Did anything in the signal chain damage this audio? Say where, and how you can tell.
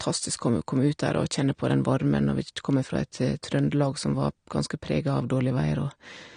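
Yes, at the codec stage: AAC compression is likely, throughout this speech. Nothing sounds above 9.7 kHz, and sibilants smear and fizz, unlike a clean low-pass roll-off. This fits a low bitrate of about 32 kbps.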